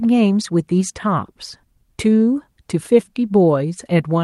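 No technical faults can be heard in the recording.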